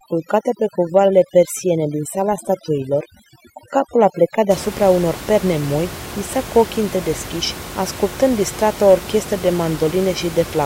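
It's a speech recording with overdone noise removal from the start to about 4.5 s. The reduction is set so hard that bands near the noise floor get gated out, leaving twinkly specks in a lowered background until "unor perne moi visa", where the room noise, about 14 dB under the speech, comes back.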